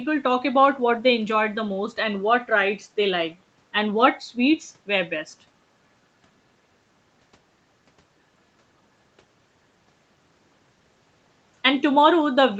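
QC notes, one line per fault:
No faults found in this speech clip. Nothing reaches above 8 kHz, which fits a call path carrying Opus in wideband mode.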